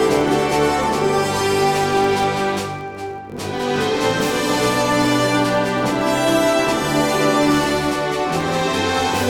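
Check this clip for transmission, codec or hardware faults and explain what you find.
One fault runs throughout the clip: a filter restarted on every block. The filter loses its state at each block boundary and restarts from silence, so each block opens with a small transient. This produces a steady 43.1 Hz buzz, which fits a 1024-sample block. Unlike mains hum, the buzz rises and falls with the signal's level.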